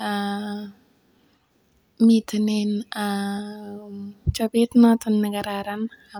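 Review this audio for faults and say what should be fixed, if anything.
No faults detected in this speech recording, so nothing needs fixing.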